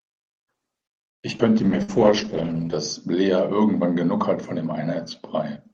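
Skip ahead at 1.38 to 1.42 s: the speech jumps forward abruptly, as if a sliver had been snipped out and the edges butted together. Audio that had already arrived behind it was discarded so playback could catch up, shortening the listening delay by about 50 ms. Roughly 70 ms of speech never plays, and only a brief 12 ms patch bridges the join, so the phrase lurches rather than pausing.

Call bitrate drop from 1.59 to 4.44 s: the Opus encoder was told to spend far fewer bits after the call's bandwidth estimate fell. The coarser coding suggests a slide from around 48 kbps to about 9 kbps, held at its lowest for roughly 1.13 s. Audio bandwidth narrows from 12 kHz to 8 kHz, so the speech loses its top-end crispness and takes on a rough, watery texture until the rate climbs back.

Burst of packet loss at 1.83 to 1.91 s, inside the low-bitrate stretch: about 60 ms of consecutive audio failed to arrive in time. 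The receiver papered over the hole by extending the last sound for 54 ms while fading it down, which comes across as a brief held buzz or dying hiss. The speech then picks up further along, with the lost portion simply absent.

Jitter buffer slow-down from 2.25 to 2.66 s: with its reserve running thin, the receiver stretched the audio by repeating individual pitch cycles and bits of pause, inserting 41 ms in total. Playback drops to about 92% speed while the pitch stays put, so syllables sound slightly drawn out and dragging.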